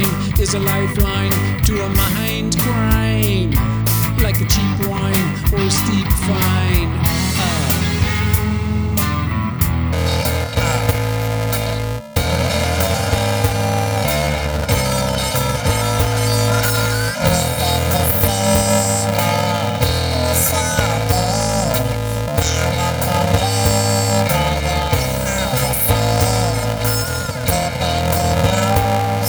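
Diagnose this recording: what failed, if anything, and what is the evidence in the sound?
From 9.93 s to the end of the recording, the sound turns into a robotic buzz at about 375 Hz with no clear octave shift, the signature of planar audio read as interleaved at the sample-format conversion stage. Each block of separate left and right samples is read as alternating pairs. A 375 Hz buzz means blocks about 2.67 ms long, which fits a 128-sample block. With blocks that short, you hear a steady buzz at the block rate rather than the octave-high flutter that longer blocks produce, and the overall pace stays correct.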